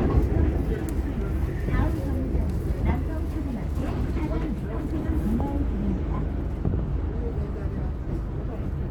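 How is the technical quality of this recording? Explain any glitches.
No faults or glitches detected.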